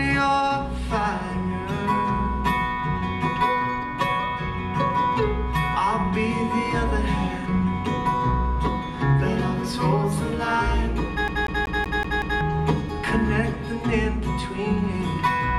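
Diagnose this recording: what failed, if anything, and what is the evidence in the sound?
Playback stage: the CD is stuck on one turn from 11.28 to 12.41 s. A scratch throws the laser back a track, so a 188 ms slice repeats six times with a brief mute at each jump.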